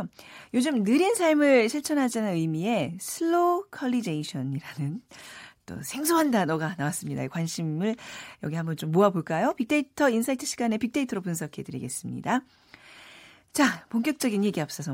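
Nothing goes wrong anywhere in this speech recording, so there's simply nothing to flag along the way.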